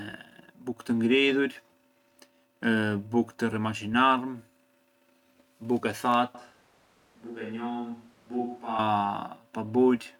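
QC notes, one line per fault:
6.35 to 8.79 s, switch to a distant microphone. The speech turns roomy and hollow at once and loses its low end. The level drops by roughly 10 dB, and room noise rises to about 30 dB below the speech. Both changes are abrupt, going in and coming back. This likely means the close microphone's signal dropped out and a pickup further away, such as a camera microphone, filled the gap. It hears more room and less direct sound.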